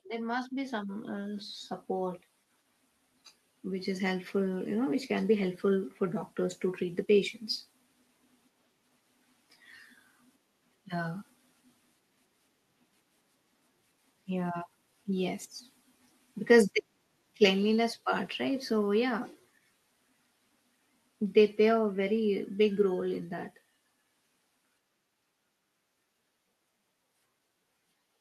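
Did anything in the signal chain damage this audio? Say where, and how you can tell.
Yes: automatic gain rising from 0.05 s to 7.1 s, introduced at the call-processing stage. Across those seven seconds the speech and the background noise floor climb together by about 10 dB, a slow, steady swell rather than a jump. Because the room noise rises in lockstep with the voice, the change comes from an automatic gain control judging the input too quiet and ramping its gain up gradually, not from the talker speaking louder.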